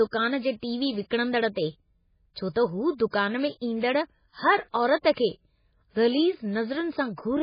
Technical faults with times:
0.00-7.43 MP3 compression

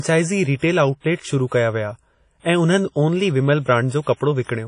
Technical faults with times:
0.00-4.67 WMA compression
0.56-0.62 pre-echo

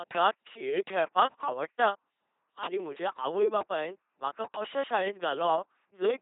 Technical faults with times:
0.00-6.21 LPC-10 vocoder

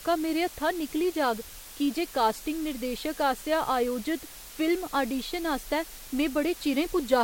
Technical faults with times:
0.00-7.24 low bit depth with dither

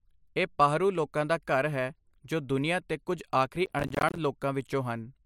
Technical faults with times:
3.66-4.18 processor overload crackle

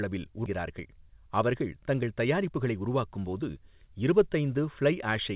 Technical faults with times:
0.46 skip ahead
2.37-3.82 jitter buffer speed-up

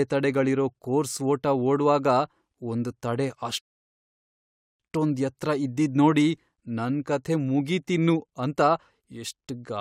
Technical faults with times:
3.60-4.80 rebuffering stall

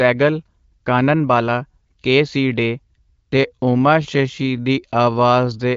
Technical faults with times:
2.77-5.77 time-stretched section

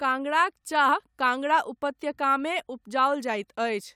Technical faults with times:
none

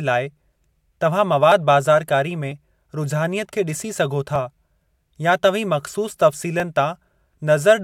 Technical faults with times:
4.36 dropped buffer (overrun)
6.60 dropped buffer (overrun)

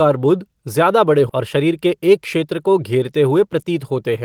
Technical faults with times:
1.29 skip ahead
1.39-2.45 jitter buffer speed-up
3.31-3.72 jitter buffer speed-up

